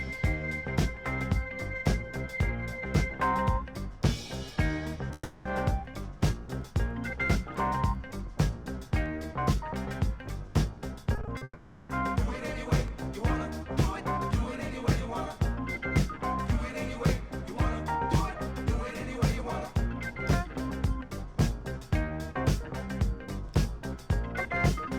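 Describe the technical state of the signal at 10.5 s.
At 10.5 s the signal is intact, with no dropout, distortion, glitch or other technical fault at that point.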